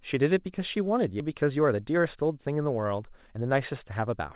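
At 1.20 to 1.22 s the speech skips ahead. Roughly a second of audio is dropped, with no fill. The two sides join almost directly.

From 1.29 to 4.21 s a jitter buffer speed-up follows. Short pitch-period pieces, around 400 ms in all, are removed. The speech runs at 114% speed, same pitch, sounding hurried. The G.711 mu-law call path leaves nothing above 4 kHz.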